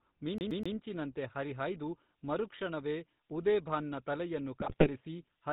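The whole recording has passed through the GSM full-rate codec, which fits its 13 kbps rate. The codec rebuilds the speech from a vocal-tract filter driven by sparse, regularly spaced pulses and discards everything above 4 kHz. The result is a narrow, buzzy, gravelly voice throughout.

From 0.38 to 0.76 s the playback is a CD stuck on one turn. The pickup keeps jumping back to the same spot, so a slice of about 0.13 s repeats three times, each with a brief drop at the jump. It sounds like a quick, even mechanical stutter.

From 1.77 s to the end, a switching supply whistle rides under the speech. A switching power supply puts a high, thin tone wandering between roughly 5.7 and 6.5 kHz, about 30 dB below the speech.

From 4.60 to 4.89 s come GSM bit errors. Corrupted filter, pitch and gain parameters reach the decoder across a run of frames, likely about a dozen. The voice breaks into brief squawks, pops and a gargling distortion over that stretch.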